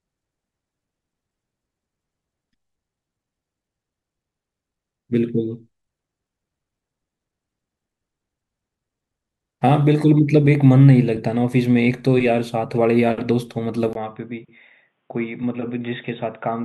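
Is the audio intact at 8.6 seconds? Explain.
Yes, the audio is intact at 8.6 seconds, with no fault to be heard at that moment.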